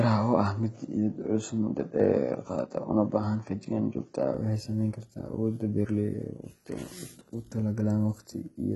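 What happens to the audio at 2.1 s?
At 2.1 s the sound is coming through what is likely a poorer input device after an input switch, which lasts from the start to 4.34 s. This narrower path cuts everything above 7.6 kHz, so the sound is dull and boxy. A spectrogram shows a hard ceiling at 7.6 kHz that lifts abruptly at 4.34 s, with no gap in the waveform and no level jump, and the faint background noise sits far below the signal.

HE-AAC compression, which runs through the whole clip, is also active here. It likely comes from a very low bitrate of about 16 kbps, which leaves only the lower spectrum coded and rebuilds the treble by copying bands upward. Those synthetic highs sound gritty and lispy on s sounds. A spectrogram shows smeared, repeated-looking upper bands with misaligned harmonics.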